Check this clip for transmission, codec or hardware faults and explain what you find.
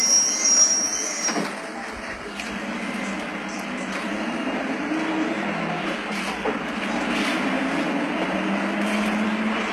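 One codec fault runs through the whole clip. The treble is gritty and metallic, with plainly audible damage and nothing above 12.3 kHz. This is likely HE-AAC compression, whose replicated upper bands don't align harmonically with the coded lows, fitting a stream around 16 kbps.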